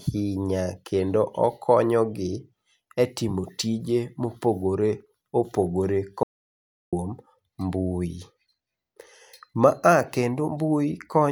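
An audio dropout to silence runs from 6.23 to 6.93 s, with the speech cutting off abruptly and returning mid-flow. The input was likely lost while silence kept being written, so those 0.69 seconds are total silence, with no room tone and nothing recoverable.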